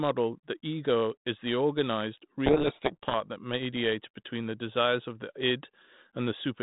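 From 2.46 to 3.16 s the speech is buried in harsh, grinding distortion. This is a codec payload misread: the G.726 decoder takes the code words in the wrong bit order. Each misplaced difference value throws the adaptive prediction off. The audio stays band-limited to telephone width, which fits 32 kbit/s G.726 coding.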